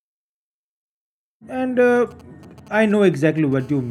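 From 1.96 to 3.54 s, GSM signalling bursts break into the speech. A nearby 2G phone is sending short groups of radio bursts. The audio circuit rectifies them. The result is a galloping run of ticks and brief 217 Hz buzzes, roughly 25 dB below the speech.

At 3.60 s, a GSM phone buzz takes over and runs to the end. The phone is now in a call and bursting steadily at 217 Hz. The rectified pulses give a hard, raspy, harmonic-rich buzz, about 32 dB below the speech.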